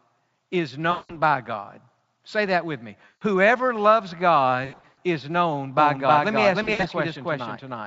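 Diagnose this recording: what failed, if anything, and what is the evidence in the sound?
The network stage dropped packets, and the speech decoder covered the gaps with VoIP packet loss concealment. Gaps fall at 0.91 to 1.14 s, 3.05 to 3.23 s, 4.65 to 4.98 s and 6.63 to 6.85 s. The missing audio totals 180, 160, 240 and 120 ms. The third and fourth gaps are broken runs, the longest 100 ms and 60 ms. In each gap the decoder repeats its last pitch and filter with falling gain, so the speech smears into a fading buzz. It stays weak briefly after packets resume. The Speex decoding itself adds little audible damage.

From 5.78 s to the end there is a doubled audio track. A second full-band copy runs about 300 ms behind the first, at roughly equal level. It has no reverberant tail or room colour, which rules out a real echo. It cuts in abruptly at 5.78 s. This points to the capture or mixing stage. 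The likely cause is a second, slower capture path feeding the same mix.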